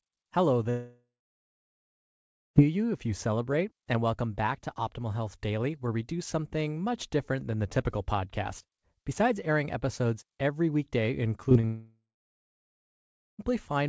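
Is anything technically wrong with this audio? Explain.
Yes. The speech has two long gaps and a brief cluster of smaller glitches.

From 0.70 to 2.57 s, and again from 11.65 to 13.40 s, there is what sounds like a long network dropout, which is the likely cause. The last sound stretches into a fading buzz for a few tenths of a second, then about 1.45 s and 1.33 s of silence follow. When the speech returns, nearly 1.9 s and 1.7 s of it are simply gone. Nothing is replayed.

Just before the second dropout there is short concealed packet loss. It falls at 11.49 to 11.53 s, 11.53 to 11.57 s and 11.61 to 11.65 s, each losing about 20 ms. The receiver patched each hole by extending the preceding sound and then blending back. The result is a quick smear and wobble, and a short consonant may vanish. These losses run straight into the long gap.

The call codec band-limits everything to 8 kHz, which fits G.722 at 64 kbps.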